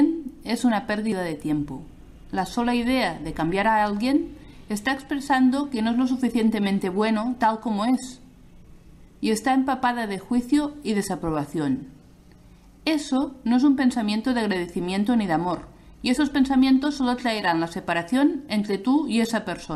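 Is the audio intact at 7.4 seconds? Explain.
Yes, the audio at 7.4 seconds plays through cleanly, with no dropout, click, distortion or other fault at that moment.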